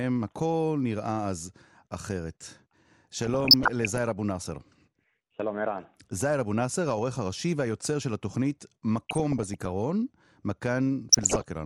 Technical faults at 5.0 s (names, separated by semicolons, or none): MP2 compression